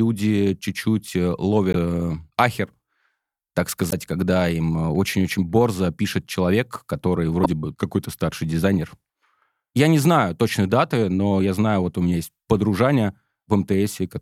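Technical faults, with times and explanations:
1.71–1.76 s (before "э ахер"), 3.88–3.93 s (before "когда им э") and 7.42–7.46 s (after "борзо пишет человек который"): damaged data in a compressed stream. Corrupt frames throw the decoder out of sync, giving roughly 45 ms glitches. The spectrogram shows broadband smears, and the waveform shows abrupt discontinuities.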